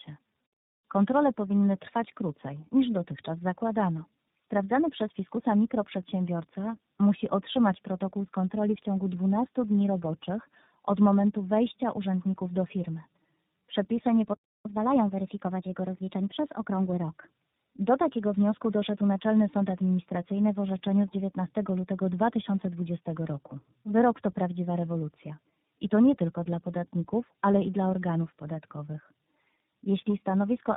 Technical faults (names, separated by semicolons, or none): tandem speech coding; catch-up at higher speed